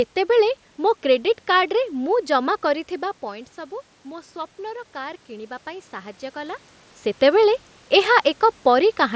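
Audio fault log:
2.68 to 6.65 s, automatic gain rising: the talker backs away near 3 s and the input drops by about 14 dB. The gain control then slowly adds about 5 dB, so voice and room noise swell together over several seconds.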